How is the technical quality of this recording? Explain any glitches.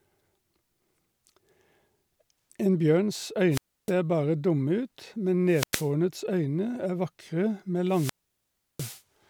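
The speech is broken three times by wireless microphone squelch dropout. The radio link fades, hiss rises, and the receiver mutes. This happens at 3.50–3.92 s with 0.30 s of silence before "bare dumme ut men", at 5.47–5.91 s with 0.10 s before "øyne er vakre med", and at 7.87–9.02 s with 0.70 s.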